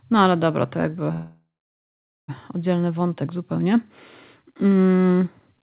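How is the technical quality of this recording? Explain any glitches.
The recording is narrowband call audio with nothing above 4 kHz, which fits G.711 mu-law at 64 kbps, and it has one glitch. A call audio freeze runs from 1.12 to 2.30 s, between "ale dobra to jakby" and "oddzielny wątek zupełnie". The likely cause is delayed packets emptying the jitter buffer. The receiver stretched the last sound into a fading buzz, then about 0.86 s of silence. Unlike a dropout, nothing is lost. Speech resumes exactly where it stopped, about 1.16 s late.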